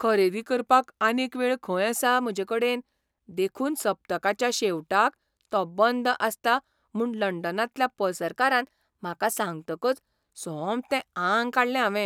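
From 0.30 to 1.95 s the speech slows 5.8% and drops about a semitone, 103 cents. It snaps back before "म्हजेकडेन देखून सप्तकाच्या". From 8.22 to 10.24 s it speeds up 5.8% and rises about 98 cents. Both are likely drift correction steps.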